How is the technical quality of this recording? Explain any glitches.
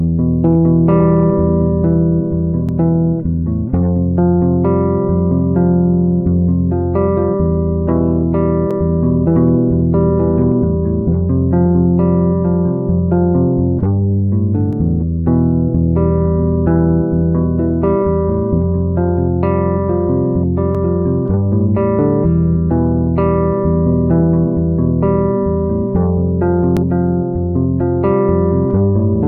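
The recording has one recurring glitch: overlapping chunks, producing a brief stutter at 2.69, 8.71, 14.73, 20.75 and 26.77 s. The audio was handled in 6.0 s blocks, and each new block began 20 ms before the previous one finished. At every boundary that 20 ms stretch is played twice. It is heard as a click or hiccup in the sound, repeating at the same steady interval throughout.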